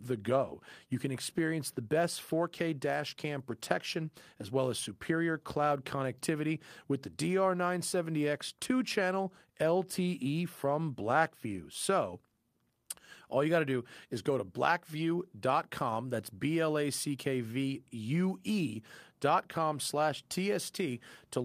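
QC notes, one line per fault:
No faults found in this speech recording. Nothing in the clip calls for a note.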